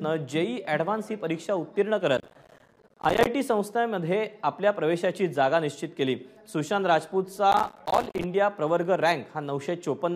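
Processor overload crackle appears twice, from 2.17 to 3.27 s and again from 7.52 to 8.24 s. In both stretches the processor falls behind and misses its deadlines for short audio buffers, apparently around 5 ms each, again and again. Each missed buffer drops out to silence with abrupt edges. Dozens of these gaps pile up, so the sound is torn into a dense, gritty crackle that stops as soon as the load eases.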